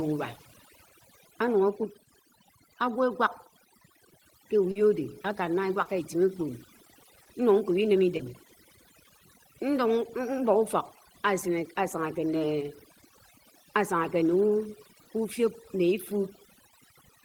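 Overdone noise removal runs throughout. The suppressor is set too aggressively, pulling individual frequency bands near its noise estimate far down or out entirely. Background gaps drop to near silence with twinkling specks, and quieter speech components go too.

Short concealed packet loss occurs at 4.71–4.77 s, 5.83–5.87 s, 7.23–7.27 s, 8.17–8.21 s and 15.03–15.07 s. About 40 ms is missing at the first gap and 20 ms at each of the others. At each gap the decoder extrapolates the preceding sound, then crossfades back, producing a brief smear or wobble in the speech.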